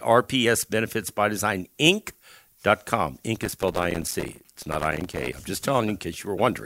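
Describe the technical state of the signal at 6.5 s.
Around 6.5 s the signal is intact, with no audible dropout, distortion or other technical fault at that point in the speech.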